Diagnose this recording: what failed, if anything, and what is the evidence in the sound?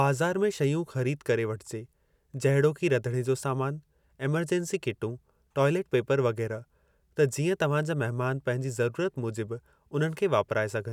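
Nothing in the signal chain shows a fault here, with no audible dropouts, clicks, distortion, level jumps or timing errors anywhere in the recording.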